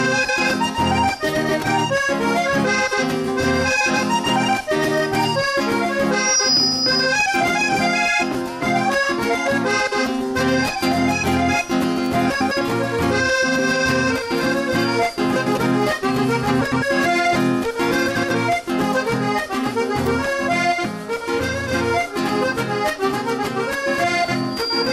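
A brief garbled flutter breaks in four times: 12.30 to 12.52 s, 15.36 to 15.58 s, 16.61 to 16.83 s, and 18.15 to 18.32 s. These are frames out of order. In each, two adjacent blocks of about 105 ms (about 78 ms in the last) were swapped, so that stretch plays back-to-front by halves. No time is lost, and the sound resumes in step.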